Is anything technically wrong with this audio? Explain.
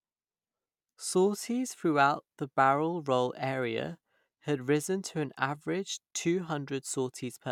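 No, the speech signal in this recording shows no technical faults.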